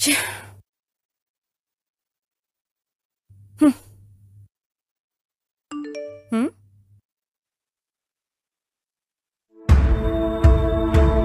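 From 7.43 s to the end at 11.25 s, the stream drops to a lower bitrate: the sound switches abruptly, with no gap, to a thinner texture, and codec artefacts become more audible. This is consistent with an adaptive stream falling back from a high-quality AAC version to a low-rate HE-AAC one after the connection slowed. On a spectrogram, energy above 12.3 kHz disappears at 7.43 s, leaving a hard horizontal ceiling, while the waveform stays continuous.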